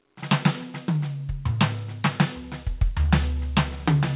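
The music has no technical faults; it comes through a call path whose band stops at 4 kHz, which fits a narrowband G.711 mu-law codec at 64 kbps.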